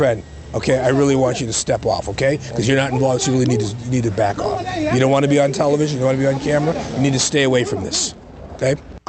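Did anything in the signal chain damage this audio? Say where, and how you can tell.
No, nothing in the chain damaged this audio: it came through a WebRTC call path whose Opus codec leaves its ordinary coding texture and stops the spectrum at about 8 kHz, and no stage adds any dropout, distortion or timing disturbance on top of that.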